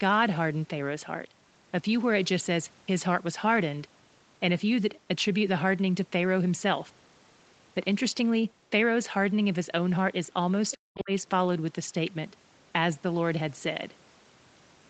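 At 10.71 to 10.75 s and again at 10.98 to 11.02 s, the echo canceller likely failed to fully remove the far end's loudspeaker playback from the microphone. The other side's voice leaks through as two brief scraps, roughly 20 dB below the talker.

Between 10.74 and 11.11 s, the canceller, likely caught in double talk, turns the near talker down along with the echo, so the speech is suppressed. The talker's voice dips sharply, by as much as about 40 dB, over roughly 0.4 s.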